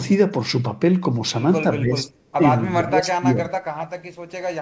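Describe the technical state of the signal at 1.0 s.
At 1.0 s the speech signal is intact, carried through the call path with its normal band limit at 8 kHz, which fits a wideband G.722 link.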